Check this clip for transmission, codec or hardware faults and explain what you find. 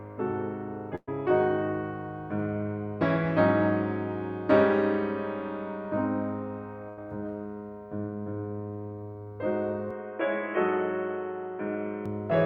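Two kinds of fault are present in this music: two bursts of packet loss and a spell that sounds like an input switched to a poorer device.

The bursts of packet loss fall at 0.95 to 1.09 s and 6.89 to 6.99 s. The receiver stretched the last audio over roughly 120 ms and 80 ms, fading it (the first ends in about 40 ms of silence), then resumed later with that span skipped. A plain dropout would mute without the held, fading tail or the jump ahead.

From 9.9 to 12.06 s the music turns abruptly dull and boxy, with nothing above 3.4 kHz. Quiet new background noise appears far below the music, and then full bandwidth returns. The likely cause is an input switched to a poorer device. There is no gap at the switch and hardly any level change. The sudden start and end and the change in noise set it apart from a steady codec low-pass.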